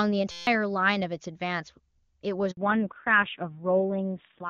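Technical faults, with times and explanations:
0.31–0.47 s, system hang loop: The audio locks into a steady buzz at about 172 Hz, which is one 5.8 ms fragment repeating exactly, 27 times in a row. The length of the loop fits a 256-sample ring buffer. The playback hardware kept cycling through that buffer while the system or driver was frozen and stopped refilling it. Because the loop is so short, the repeats blur into a pitched tone rather than a stutter. Roughly 150 ms of the real signal is lost behind it.
2.51–2.57 s, handover gap: The sound fades out within a few tens of milliseconds and stays silent for 60 ms. This happens when the call is passed from one network link to another and no speech frames arrive during the switch. The decoder has nothing to play, so it damps its output to silence until frames arrive on the new link. Whatever was said in that 60 ms window is gone and cannot be recovered.
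2.57 s to end, fallback to narrowband: Right after the gap the bandwidth collapses, leaving nothing above 4 kHz. The sound turns muffled and duller, with a rougher texture. This points to the call dropping from HD Voice AMR-WB, heard before the switch with its airy upper band intact, to narrowband AMR-NB at a low rate around 5.9 kbit/s. The sibilants and the presence range above 4 kHz are cut off, and the low-rate coding adds the graininess.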